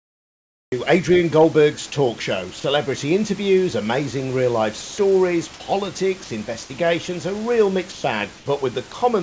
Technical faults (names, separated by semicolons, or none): cut-off start; sound dropped by the voice detector; comfort noise in place of the background